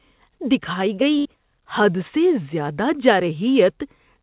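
Around 1.18 s the speech hits a burst of packet loss that runs to about 1.35 s. The receiver papers over the first 68 ms or so by stretching out the last sound it had, so you hear a brief held, fading tail. After that roughly 60 ms simply goes missing, and the speech picks up further along with that stretch gone. The whole thing sits inside a G.711 call path with nothing above 4 kHz.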